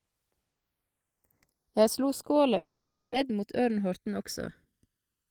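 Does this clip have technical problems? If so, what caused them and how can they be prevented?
Yes. The two channels run on separate clocks that disagree by roughly 150 ppm, so the delay between them creeps to about 0.7 ms. Summed to mono, that sliding delay sweeps comb notches slowly across the spectrum, heard as a slow flanging for the whole clip. Capturing both channels from one device, or locking both devices to a shared word clock, prevents this channels-drifting-apart effect.

From 2.57 to 3.16 s, just after "slo skåla", a long network dropout likely stopped packets from arriving, and the receiver's delay grew by around 150 ms. It continues the last sound as a fading buzz or hiss, then about 0.29 s of silence, and roughly 0.4 s of speech never comes back. Forward error correction or redundant packets on a steadier network path would prevent this.

From 3.23 to 5.02 s, the jitter buffer held more audio than its target after the backlog arrived. 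A jitter buffer speed-up trims short pitch-period pieces, about 150 ms in all, so the speech runs at 108% with unchanged pitch and sounds hurried. A more stable network, or a buffer that drains its excess more gradually, prevents this.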